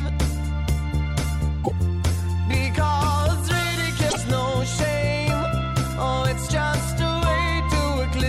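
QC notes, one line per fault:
1.63–1.71 s, broken MP3 bit reservoir: an 80 ms glitch as the first frames after the cut misdecode, and the audio resumes ahead of where it broke off. The span fits about three 26.1 ms MP3 frames, likely from frames lost before this point whose successors then decoded against borrowed bytes from the wrong frame.
4.09–4.17 s, broken MP3 bit reservoir: the same 80 ms glitch and forward jump recur, consistent with the first event.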